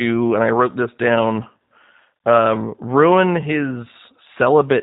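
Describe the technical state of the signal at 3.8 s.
At 3.8 s the speech sounds slightly rough and synthetic, band-limited with nothing above 4 kHz, as it does throughout the clip. This is G.729 codec damage, which fits an 8 kbit/s stream: each 10 ms frame is rebuilt from a vocal tract filter, a pitch predictor and a few pulses.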